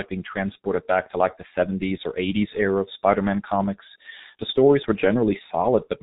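The speech has been passed through the G.723.1 codec at a rate that fits roughly 6 kbit/s, with heavy codec damage throughout. The codec models the voice in 30 ms frames and refreshes that model slowly, discarding everything above 4 kHz. The result is muffled, band-limited speech with a hoarse, buzzy texture, and consonants that smear into neighbouring sounds because rapid changes fall between the coarse frame updates.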